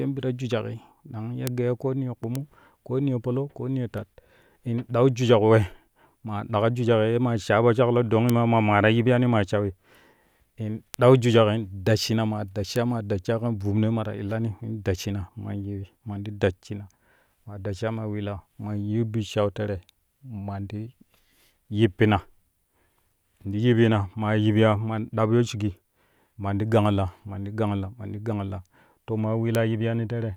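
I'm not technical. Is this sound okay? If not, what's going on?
No. You'll hear six sharp ticks at 1.47, 2.35, 8.30, 10.94, 12.76 and 29.55 seconds. These are bit error spikes: a single stored digit flipped, making one instant jump.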